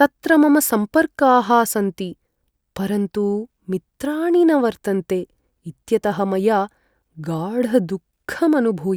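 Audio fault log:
No faults are present in this speech recording. Nothing in it calls for an entry in this log.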